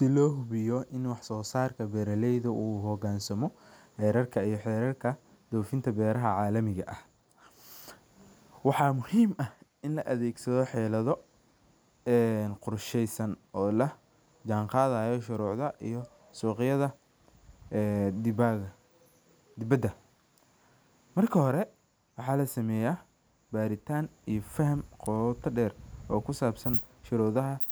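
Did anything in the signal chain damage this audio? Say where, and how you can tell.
Yes. At 25.06 s, just before "qota deer oo", a sharp snap of only a few milliseconds sits on top of the speech at a modest level. This is an electrical switching spike, likely an arc from a nearby switch or motor coupling into the analogue wiring. It differs from a digital dropout click because the speech continues unbroken underneath.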